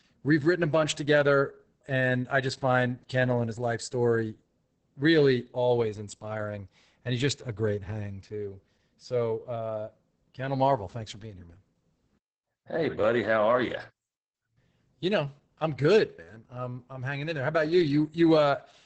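Opus voice compression runs through the whole clip. The linear-prediction speech coder has narrowed the band, leaving nothing above 8.7 kHz, and codes the excitation coarsely, which fits roughly 10 kbps. The speech sounds muffled, hoarse and faintly robotic.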